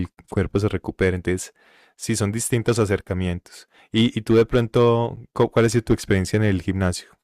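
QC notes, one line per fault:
5.16 s, gap between stream segments: a hard-edged dropout of roughly 9 ms cuts briefly into the speech. Two stream segments' timestamps failed to meet, and the player filled the hole with silence, so the audio stretches slightly without losing any content.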